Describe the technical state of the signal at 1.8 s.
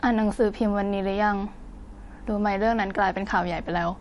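At 1.8 s the speech sounds watery and swirly, with sibilants turning metallic and chirpy and nothing audible above about 11.3 kHz. This plainly audible damage runs through the whole clip, not just this moment, and is likely MP3 compression at a low bitrate, around 48 kbps. Short of bits, the encoder cuts the treble at a fixed frequency and zeroes weak frequency lines, which flicker on and off from frame to frame.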